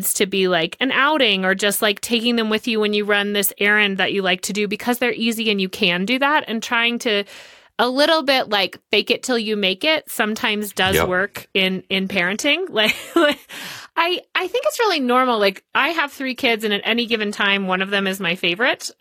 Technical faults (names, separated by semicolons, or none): adaptive stream at a lower bitrate